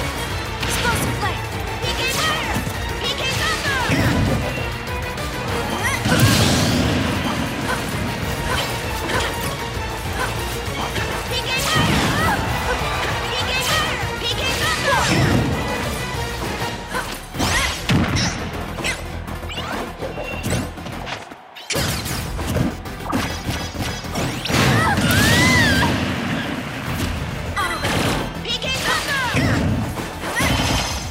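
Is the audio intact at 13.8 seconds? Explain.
Yes, at 13.8 seconds the audio is intact, with nothing audibly wrong at that point.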